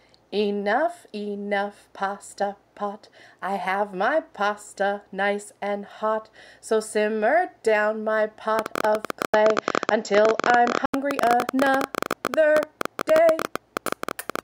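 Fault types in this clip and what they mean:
Train of clicks: from 8.59 s to the end, roughly a hundred same-shaped clicks at an irregular 15 per second, some about 15 dB above the sound, likely from interference.
Input switched to a poorer device: 9.26–10.94 s, an 80 ms gap, then nothing above 7.6 kHz and a level shift of about 5 dB, likely a changed input rather than filtering.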